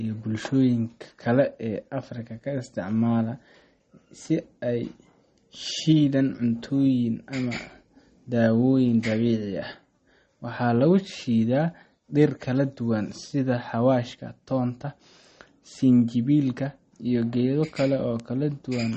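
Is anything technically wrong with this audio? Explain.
Yes, two things. Throughout the speech there's plainly audible codec damage, likely MP3 compression at a low bitrate, which fits something around 32 kbps. Nothing comes through above 8.3 kHz, so the top is dull and the s sounds go smeared and chirpy. That happens when the encoder runs short of bits: it chops off the treble and drops weaker frequency lines, which flicker on and off between frames and give everything a watery, swirly edge.

There are also two bit error spikes, at 13.25 s right after "dhir kala duwan" and at 18.20 s. Each is a single sharp, broadband tick that has nothing to do with the speech around it. A flipped bit makes a sample value jump by a power of two and snap straight back. The first is one bad sample, and the second spans three samples in a row.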